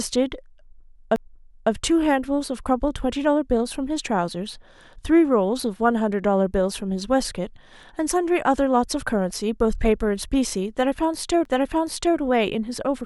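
A speech recording with two CD skips, at 1.16 s and 11.45 s. Each is a brief mute, of about 10 ms and 7 ms respectively. The playback then resumes from a different point. A knock or disc flaw made the laser jump to another turn of the spiral track.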